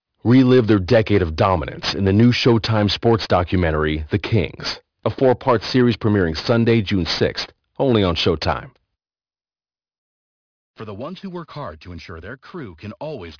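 Throughout the clip, the audio was resampled to a much lower rate with no anti-alias filter in front, so everything above the new limit folds back as aliasing. The band edge sits at 5.5 kHz, which fits a drop from 44.1 kHz to about 11 kHz. Sibilant energy reflects down into wrong, unrelated frequencies, roughly 15 dB below the speech. The result is gritty, metallic hiss on consonants and a spectrum pressed hard against 5.5 kHz.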